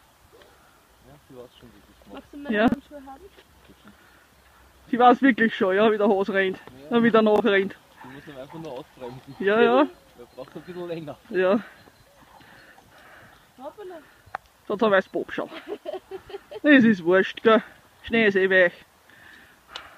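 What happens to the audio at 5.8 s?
Nothing goes wrong at 5.8 s; the audio plays through that moment intact, with no dropout, click or other audible fault.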